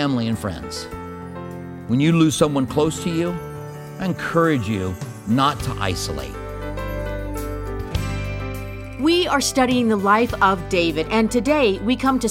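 No technical faults can be heard anywhere in the recording. There is nothing here that needs a timestamp or a fix.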